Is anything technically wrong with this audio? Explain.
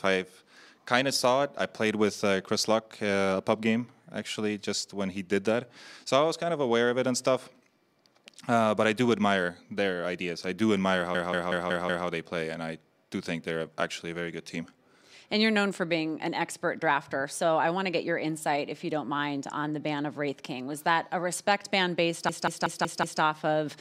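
Yes, there's a system hang loop, twice: 11.15 to 12.07 s and 22.29 to 23.22 s. Each time the system stalls while playback keeps cycling one 186 ms chunk, which fits an 8192-sample buffer, five times at about 5.4 Hz, giving a machine-gun stutter.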